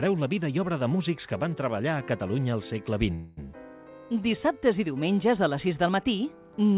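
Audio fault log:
3.14–3.39 s, call audio freeze: for about 0.23 s the sound stalls into a continuation of the last moment, a buzzing, hissy carry-over that fades but never drops to full silence. The likely cause is packets held up in transit, leaving the jitter buffer empty while the receiver filled the gap. When the audio resumes it picks up where it stopped, with nothing lost, so everything after it plays about 0.23 s later. The band stops at 4 kHz, consistent with a G.711-type telephone codec.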